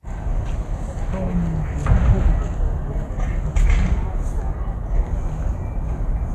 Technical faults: wrong sample rate

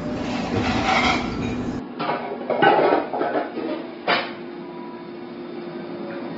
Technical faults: AAC compression; input switched to a poorer device

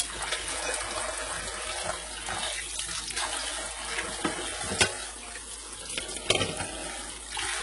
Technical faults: HE-AAC compression

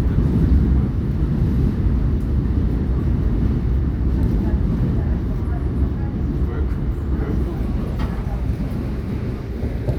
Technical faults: none

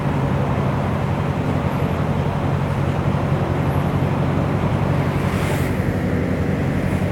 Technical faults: none

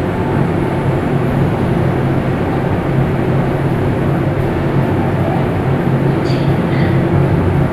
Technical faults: none

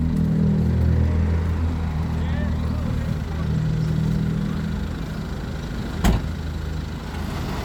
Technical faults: none

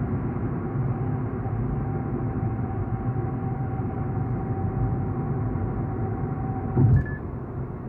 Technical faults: none

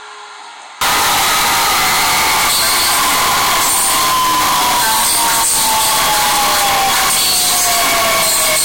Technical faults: float read as integer

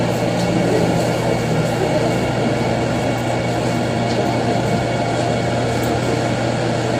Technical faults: low-delay AAC compression

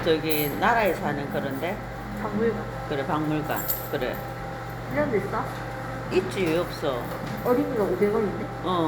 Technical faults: none

